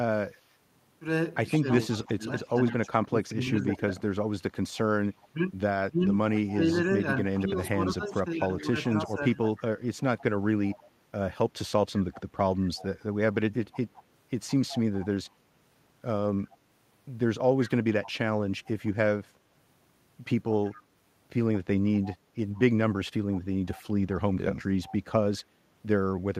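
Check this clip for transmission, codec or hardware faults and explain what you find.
Two echo-canceller faults are audible.

Echo leak, from 0.37 to 18.69 s and again from 20.7 to 26.26 s: the far end's echo canceller likely failed to remove what its microphone picked up from the loudspeaker. The result is a faint copy of the speech returning 163 ms late, about 20 dB below it.

Speech suppressed in double talk, between 1.57 and 9.38 s: when both sides spoke at once, the canceller likely could not separate its own talker from the loudspeaker echo and attenuated both. The speech dips in pieces, by up to about 20 dB, for roughly three seconds in total.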